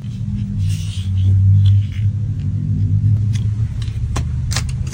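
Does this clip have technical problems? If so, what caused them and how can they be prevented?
Yes. From 0.00 to 3.17 s there is channel delay (comb filtering): one channel arrives around 20 ms late and the two are summed to mono, so shared content cancels at evenly spaced frequencies, with the first notch near 30 Hz. A delay that long gives a rough or slightly doubled quality. On a spectrogram this shows as dense, regularly spaced dark horizontal stripes a few tens of hertz apart; the waveform shows each transient smeared by a second copy about 20 ms later. To prevent it, align the channels before summing, or take a single channel instead of folding both to mono.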